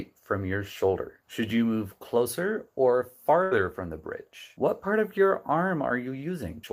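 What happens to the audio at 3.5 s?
A burst of packet loss hits from 3.43 to 3.53 s. Several consecutive packets never arrived in time, so the receiver stretched the last sound for about 78 ms, letting it fade, before playback resumed with roughly 80 ms of audio skipped.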